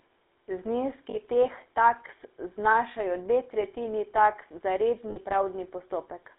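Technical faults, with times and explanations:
Throughout, GSM full-rate codec: the speech passes through the original 13 kbps GSM coder, which models the vocal tract and excites it with a sparse regular pulse train, giving a buzzy, gravelly roughness. The line is limited to roughly 300 Hz to 3.7 kHz, so its harshness comes with a muffled top, unlike the clean dullness of plain band-limiting.
1.10 to 1.18 s and 5.10 to 5.17 s, lost GSM frames: about 40 ms and 60 ms of missing frames are filled by repeating the last good frame. The sound smears into a brief metallic ring, rather than the hard click or abrupt silence of a simple dropout.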